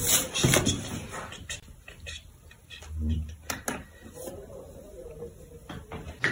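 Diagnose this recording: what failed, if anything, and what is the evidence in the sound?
No fault detected in this recording.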